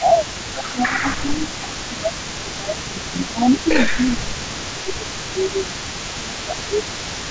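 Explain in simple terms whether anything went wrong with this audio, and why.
Two things went wrong here, and both come from the call's echo handling.

The first is speech suppressed in double talk. From the start to 3.56 s, and again from 3.83 to 6.83 s, the voice keeps sinking in level and thinning out, as if someone were riding the volume down. That's most likely the echo canceller getting confused while both sides talked at once: it couldn't tell the real talker from the loudspeaker's echo, so it turned everything down.

The second is an echo leak, and it runs through the whole clip. Quietly underneath the main voice there's a second copy arriving 454 ms late, a bit under half a second. It's well below the main voice. The other side was likely on a loudspeaker, and its echo canceller didn't catch all of what its microphone picked up, so some of it came straight back down the line.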